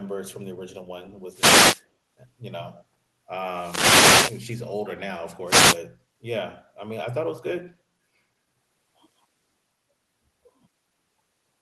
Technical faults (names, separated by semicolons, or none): wireless microphone noise hit